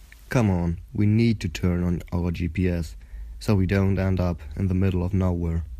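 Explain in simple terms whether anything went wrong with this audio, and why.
A faint, steady rattle runs under the speech from 0.12 s to 5.77 s: tiny ticks about twenty times a second, roughly a hundred in all, heard most on loud stretches and missing in pauses. These are clock slip clicks. The likely cause is two pieces of equipment keeping time separately, one running fast by roughly 400 parts per million, so a single sample gets dropped or repeated each time the drift adds up.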